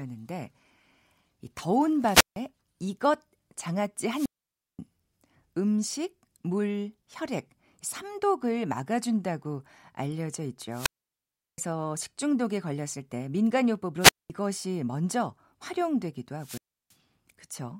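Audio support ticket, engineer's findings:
Wireless microphone squelch dropout, five events in the speech: 2.00–2.44 s, 4.10–4.79 s, 10.70–11.58 s, 14.00–14.30 s, 16.38–16.94 s. Symptom: hiss swells, then near-silent hole, then speech returns. Muted spans about 0.16, 0.53, 0.72, 0.21 and 0.33 s. Component: analogue FM radio link and receiver. Mechanism: RF signal fades, receiver squelch gates output off until carrier recovers.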